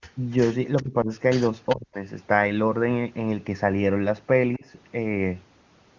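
Faint echo leak appears at 0.01, 0.77, 1.69 and 4.53 s as a delayed copy of the talker arriving about 0.39 s late. It is likely a loudspeaker echo the far-end canceller failed to remove. Unlike room reverberation, it is one distinct repeat at a fixed lag, not a smeared tail. Its level varies from very faint to moderately faint.

Just after three of these leaks, speech is suppressed in double talk from 0.82 to 1.1 s, 1.74 to 2.0 s and 4.57 to 4.65 s. The voice dips by roughly 20 to 40 dB, deepest in the second stretch. This is likely the canceller ducking everything while it confused talker with echo. Unlike network dropouts, these dips line up with the echo.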